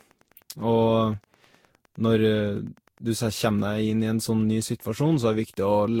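A Wi-Fi radio sitting close to the audio circuitry is being picked up and rectified, and its beacon repeats every 102.4 ms. That Wi-Fi interference runs through the whole speech clip as a steady tick close to ten times a second, sitting about 40 dB below the voice, so it is faint but clearly regular.

Also present from start to finish is generation loss. The speech has most likely been decoded and re-encoded around five times with a lossy codec, probably Vorbis at a rate near 64 kbit/s. Each pass requantised the audio on a shifted frame grid, and the errors stacked up. The result sounds swirly and hollow, with smeared consonant attacks, and nothing remains above 16.7 kHz.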